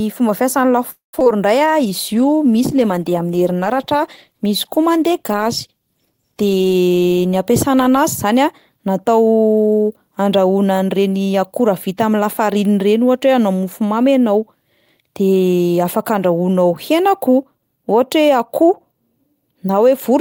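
Just after "fomba fiasan'ny", at 0.90 s, the speech hangs as a fading buzz that drops into about 130 ms of silence before resuming at 1.14 s with nothing skipped. This call audio freeze was likely delayed packets draining the jitter buffer, leaving a 229 ms gap.

Straight after, short concealed packet loss smears the audio at 1.16 s, 1.19 to 1.22 s and 1.25 to 1.27 s. These are quick smears and wobbles where about 10 ms each failed to reach the decoder and was patched by extending the previous sound.

From 1.66 s to 6.81 s a call bitrate drop leaves the speech rough, watery and dulled. The bandwidth estimate fell and the encoder went from 40 to 17 kbps for about 5 seconds, coding more coarsely and trimming the upper frequencies.

Between 10.82 s and 12.65 s the speech sounds hurried but keeps its pitch, running at about 111% speed. This jitter buffer speed-up came from an overfull buffer, which the receiver shrank by cutting out pitch-period slices totalling about a fifth of a second.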